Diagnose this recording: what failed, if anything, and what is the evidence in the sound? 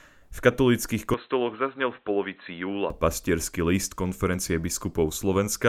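From 1.14 s to 2.90 s, the speech turns dull and boxy. Nothing is left above 4 kHz. The level falls by roughly 5 dB, and a faint new noise floor appears well below the speech. There is no gap at either switch. The dull sound begins just before "pastierský list konferencie". This points to a failure at the driver stage, likely an input switched to a poorer device. Capture briefly moved to a narrower-band microphone with its own gain and noise, then switched back.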